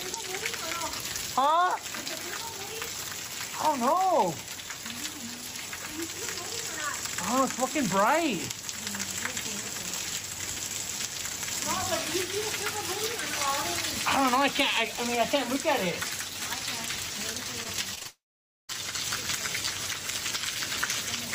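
Repeated packet loss (robotic sound) runs from 17.63 to 18.07 s. Four short holes, the longest about 22 ms, are each patched by stretching the preceding sound. That leaves roughly a sixth of the stretch concealed and gives a choppy texture with fragments missing.

A long network dropout follows directly, from 18.07 to 18.71 s. The last sound is extended as a brief fading buzz or hiss, then about half a second of silence follows before the audio resumes further on, likely because the stream stopped arriving altogether.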